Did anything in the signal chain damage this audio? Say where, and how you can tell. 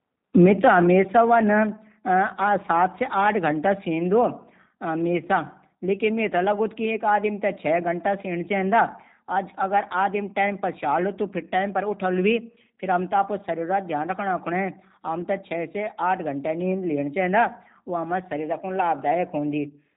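Yes. Across the whole clip the speech sounds slightly rough and synthetic, and nothing above 3.8 kHz is present. The damage comes from the codec stage, and the sound matches the G.729 codec in its G.729A form, which fits a bitrate of about 8 kbit/s. That codec discards the actual waveform. It rebuilds each 10 ms frame from a vocal tract filter, a pitch predictor and a few pulses, so the detail it cannot model comes out plainly audible.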